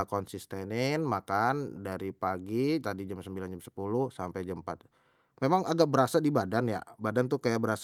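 No technical faults can be heard anywhere in the recording. The speech runs without any audible interruption or disturbance.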